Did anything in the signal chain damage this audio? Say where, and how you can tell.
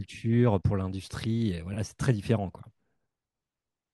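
No, no stage of the chain audibly damaged this speech.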